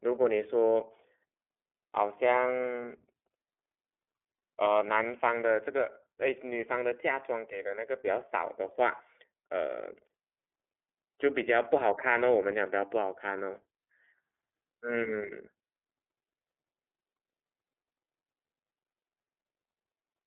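This speech clip carries iLBC codec damage throughout. Nothing passes above about 3.7 kHz. Each frame is coded independently, leaving a plainly audible, slightly rough, synthetic edge, consistent with 30 ms frames.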